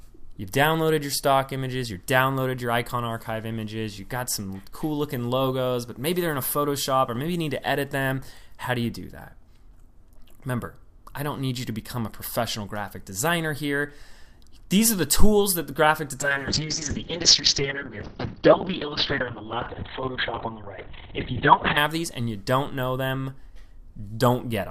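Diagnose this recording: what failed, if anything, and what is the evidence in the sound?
A call bitrate drop, at the call processing and codec stage, runs from 16.2 s to 21.83 s. The audio loses its top end, with bandwidth collapsing from about 20 kHz to about 4 kHz, and turns coarse and muffled for roughly 5.6 s before clearing. The call's bandwidth estimate fell and the encoder was throttled to a very low rate, which fits a drop from around 128 kbps to about 7 kbps. At that rate the codec both quantises coarsely and discards high frequencies.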